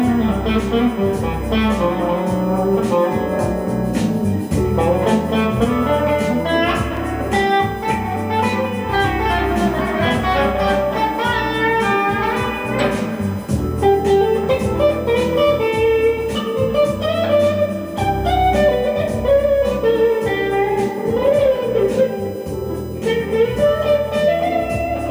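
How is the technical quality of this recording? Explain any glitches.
Technical quality is compromised by two faults: a constant USB whine and one brief dropout.

USB whine runs through the whole recording, pitched on a 1 kHz grid with the strongest component at 15 kHz, roughly 30 dB below the signal. Current drawn by the USB bus in 1 ms frames leaks into the audio. Unlike mains hum, it sits high and thin on kHz multiples.

At 6.97 s a block of digital silence lasting 3.35 ms cuts the sound to silence and back with no fade, most likely because the output buffer was not filled in time. It comes across as a tick. Unlike a crackle or clipping click, the sound is absent rather than distorted.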